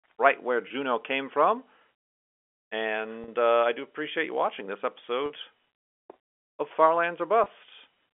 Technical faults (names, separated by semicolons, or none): packet loss with pitch repetition